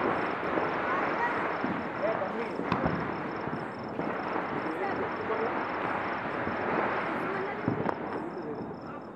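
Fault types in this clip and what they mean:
Nothing stood out on listening; no audible faults came through anywhere in the audio.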